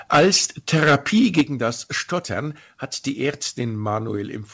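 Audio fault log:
0.12–0.45 s and 0.73–1.41 s, microphone overload: peaks in the speech are flattened, with the input driven about 11 dB and then about 12 dB past full scale. Roughly a tenth of samples in the first stretch and somewhat fewer in the second are squared off, giving a harsh crackle on loud syllables. This is likely caused by excessive microphone input gain.
0.15 s and 1.41 s, microphone volume stepped down: the level drops abruptly by 2 dB at 0.15 s and by 8 dB at 1.41 s, with background falling alongside the speech. The cause is likely automatic gain control cutting the device input after clipping. The second drop lands exactly as the overload ends.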